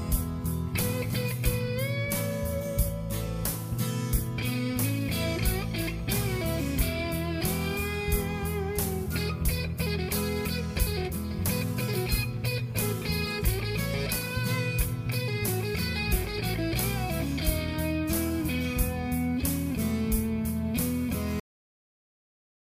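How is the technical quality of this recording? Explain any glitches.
The recording has one fault: a cut-off end at 21.40 s. The final buffers were never written, so the sound stops mid-event and drops straight to digital silence with no decay, holding that silence for the remaining 1.4 s.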